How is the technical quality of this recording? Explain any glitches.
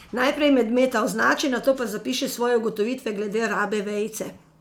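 No glitches turn up here at all, since nothing breaks into the recording anywhere along the way.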